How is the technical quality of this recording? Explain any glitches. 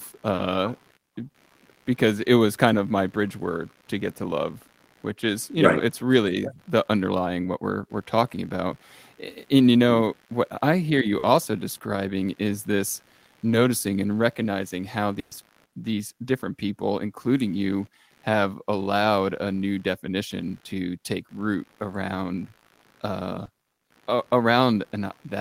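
The recording has two problems: a constant computer noise under the speech and several packet-loss dropouts.

Computer activity noise runs through the whole clip. It pulses at roughly 70 Hz, about 35 dB below the speech. The audio interface shares a ground with the computer. When the processor, graphics card or mouse changes its load, that ground shifts, and the shift leaks into the signal. You hear a buzzing or chirping texture that rises and falls with the machine's activity. It does not follow the speech.

Short concealed packet loss occurs four times: at 0.35 s, 11.19 s, 13.49 s and 23.45 s. The first two cover 40 ms each. The last two cover 20 ms each. In each case a bit of the call arrived too late to decode. The receiver bridged the hole by extending the last sound, as pitch if it was voiced or as shaped noise if not. It then blended back into the real audio. Each spot sounds like a brief smear or wobble, and a short consonant can drop out.

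A burst of packet loss hits from 15.19 s to 15.33 s. Here 120 ms of audio never arrived, and the receiver filled the same 120 ms. It held on to the last sound and turned it down as the gap went on. A voiced sound becomes a held buzz, and other sounds become a fading hiss. The speech then picks up again further along, and the 120 ms in between is lost.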